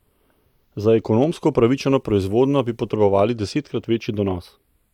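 Right from the start and all the way through, the speech has channels drifting apart: each side was clocked separately, off by a few tens of parts per million, so the gap between them creeps up to about a tenth of a millisecond. In mono that sweeps comb notches slowly, giving a slow flanging wash.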